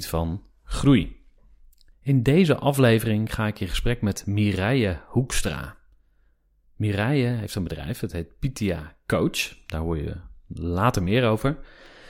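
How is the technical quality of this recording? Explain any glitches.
No technical faults or glitches can be heard in this speech recording. There is nothing that needs explaining.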